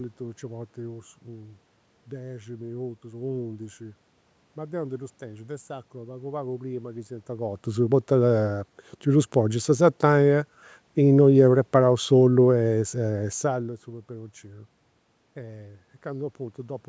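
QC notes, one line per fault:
No faults found; the room noise, the level shifts around 7 s and 13.5 s where the talker moves relative to the mic, and the call-path band-limiting with nothing above 8 kHz are all expected.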